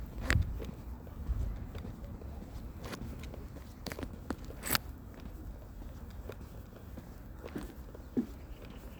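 No technical faults are audible.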